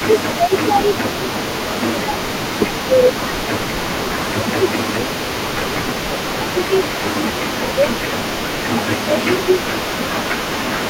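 From the very start to the end at 10.89 s, a faint second copy of the speech trails the original by about 0.44 s, sitting roughly 15 dB below it. This is an echo leak: the far end was likely playing the call over a loudspeaker, and its echo canceller let part of the returning signal through. On a spectrogram, the speech's harmonic pattern reappears as a paler duplicate shifted right by that fixed gap. The waveform shows small trailing bursts behind louder ones.

Overlapping with this, the speech itself repeatedly sinks in level. This is speech suppressed in double talk, likely caused by the echo canceller failing to separate the talker from the echo while both were present and turning everything down. The dips fall between 0.06 and 0.9 s, 1.27 and 3.43 s, 4.24 and 7.9 s, 8.67 and 10.11 s, and 10.51 and 10.86 s. They reach roughly 15 dB in the first three stretches and roughly 10 dB in the last two. 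The affected time in each stretch ranges from a few tenths of a second to about three seconds, and the longest falls in the 4.24 to 7.9 s window. There the speech sounds pushed back. The waveform envelope sags in uneven notches, and the spectrogram darkens in patches.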